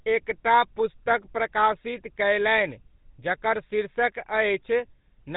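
Speech carrying the GSM full-rate codec from start to finish: a plainly buzzy, gravelly roughness, with a hard ceiling at 4 kHz on a spectrogram and coarse pulse-driven harmonics beneath it, consistent with a 13 kbps full-rate GSM speech coder.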